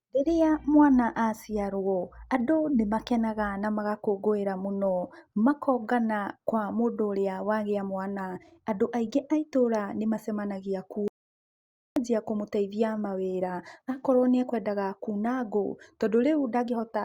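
A speech recording with an audio dropout to silence from 11.08 to 11.96 s: the sound cuts off abruptly and returns mid-flow, losing 0.88 s with no room tone. The waveform shows a flat line, and the spectrogram shows a blank vertical band. The cause is likely a briefly lost input.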